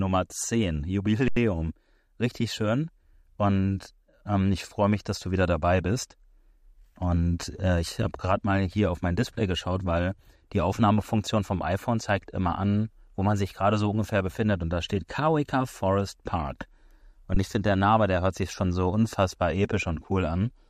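At 1.28 s the speech freezes for about 85 ms, then again at 17.34 s for about 21 ms. Both are an underrun with held sample: the buffer ran dry, the output sat flat at its last value, and playback picked up where it stopped, so each gap ends softly.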